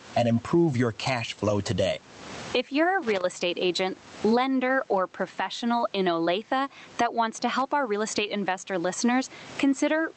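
Gain pumping runs through the whole clip: the input gain is likely set far too high and a fast limiter clamps down on each loud syllable. The room noise sits about 36 dB below the speech, and the gain swings by roughly 20 dB, leaving the levels squashed.

Loose connector crackle appears from 3.03 to 3.24 s, after "you're a" and before "estate agent lender or", and again from 7.38 to 7.62 s, after "that wants" and before "our real estate investor". A worn or dirty contact is rapidly making and breaking, chopping the signal into brief irregular bursts of scratchy crackle.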